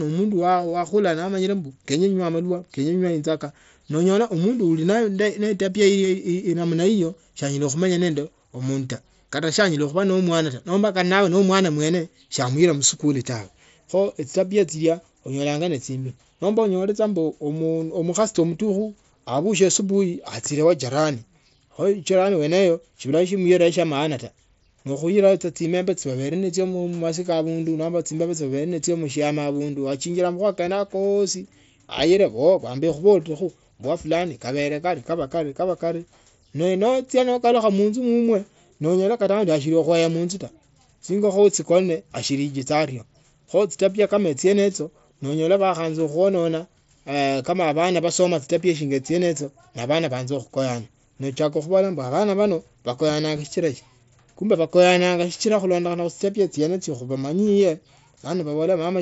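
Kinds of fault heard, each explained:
No faults can be heard anywhere in this speech.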